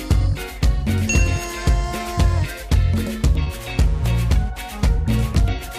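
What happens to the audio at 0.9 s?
Nothing goes wrong at 0.9 s; the audio plays through that moment intact, with no dropout, click or other disruption.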